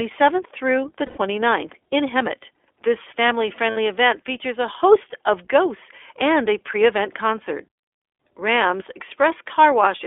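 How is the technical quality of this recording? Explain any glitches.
The quality is limited. It's speech running through a narrowband VoIP codec the whole way, with two short dropouts patched over by the decoder.

The iLBC codec is on throughout. The band sits at roughly 300 Hz to 3.5 kHz, so there's no air or sibilant sparkle, just that thin phone-line sound. iLBC codes each 20 ms frame's excitation on its own, and the plainly audible roughness and slightly synthetic edge fit its 15.2 kbps mode.

Lost iLBC frames show up twice. The first runs from 1.06 to 1.18 s, right after "through the", lasting 100 ms, which fits five dropped frames. The second runs from 3.70 to 3.78 s, just before "event features a host", lasting 60 ms. In each gap the decoder repeats the last pitch cycle with some noise mixed in, so you hear a brief held, buzzy vowel. Since the frames don't depend on each other, the voice snaps back cleanly right after.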